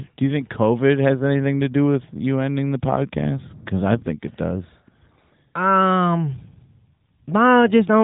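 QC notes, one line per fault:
Nothing to flag on this speech clip, so there's no fault line to log here.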